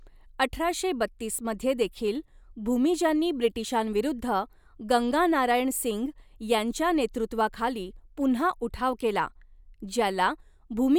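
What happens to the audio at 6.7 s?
Nothing goes wrong at 6.7 s; the speech carries on there without any dropout, click, distortion or other audible fault.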